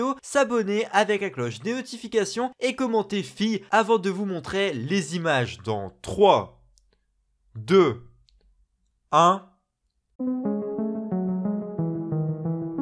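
From 5.45 s to 10.44 s the sound turns slower and lower, dragging at about 0.92 times its normal speed with everything pitched down by about 1.5 semitones. This is a wrong sample rate fault. The samples are played back more slowly than they were captured, with no conversion, so timing and pitch fall together by the same ratio. The drop fits audio recorded at 24 kHz being played at 22 kHz.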